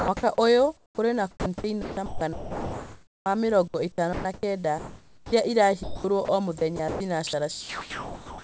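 From 0 to 0.38 s the sound is chopped by the voice detector. About 109 ms of quiet edges drop out and synthetic fill takes their place. The sender's voice detector is likely toggling transmission on and off. Nothing is heard above 8 kHz anywhere, which fits a wideband call codec such as G.722.

From 0.77 to 0.98 s comfort noise replaces the background. The real room tone sits about 38 dB below the loudest parts. Here it gives way to a flat, featureless hiss about 9 dB quieter. This lasts about 210 ms. The likely cause is the sender pausing transmission while the receiver fills the gap with shaped noise.

At 0.96 to 0.98 s the onset is clipped by the voice detector. About 20 ms of the start is missing. The sound begins abruptly and loses its soft attack. The detector was likely slow to notice the sound returning, so noise fills that first instant.

The chopping returns five more times: 1.31 to 3.26 s, 3.68 to 5.32 s, 5.83 to 6.28 s, 6.58 to 7.00 s, and 7.27 to 8.43 s. 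The replaced spans total about 1.44 s, 893 ms, 240 ms, 180 ms and 981 ms. Syllable edges vanish into fill, and the speech is left with holes.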